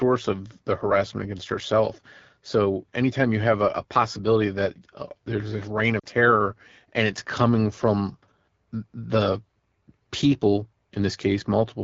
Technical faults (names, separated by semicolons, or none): AMR wideband (HD Voice) codec; lost AMR speech frames